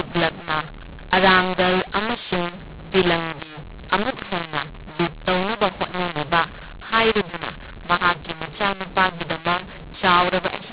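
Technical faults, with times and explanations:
Throughout: mu-law and A-law mixed up. The speech was coded with G.711 mu-law but decoded as A-law, so each 8-bit code lands on the wrong level. Some samples come out too large, others too small, and near-silent ones jump well above zero. This makes the sound harsh and gritty, with hiss filling the pauses. A waveform shows a jagged envelope and gaps that never settle to zero. A spectrogram shows broadband noise smeared up to the 4 kHz ceiling of the 8,000-sample-per-second telephone band.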